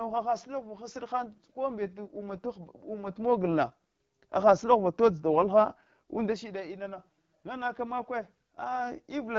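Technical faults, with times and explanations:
Throughout, AMR wideband (HD Voice) codec: the speech has a plainly audible rough, raspy edge, which points to one of the codec's two lowest modes and fits the 8.85 kbit/s rate. AMR-WB rebuilds speech below 6.4 kHz from a model of the vocal tract excited by a sparse train of pulses, and at so few bits that excitation is coarse, so voicing turns grainy. The band from 6.4 to 7 kHz is shaped noise rather than real signal.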